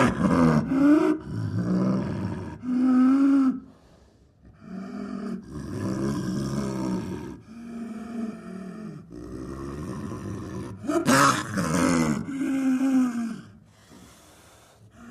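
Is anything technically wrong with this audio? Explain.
Yes. There are two faults.

From 0.0 to 5.26 s, de-emphasis has been applied wrongly. A treble cut meant to reverse pre-emphasis has been applied to audio that had no boost, or applied a second time. The response falls smoothly toward the top end. At 10 kHz it sits about 8 dB below its level at 1 kHz. The sound is dull and muffled.

From 9.71 to 14.05 s there is a time-stretched section. The pace drops abruptly to about 0.71 times normal speed, while the pitch stays the same. This is likely software stretching the audio to fill a set length, repeating short pieces to keep the pitch steady. The slowed passage sounds drawn out.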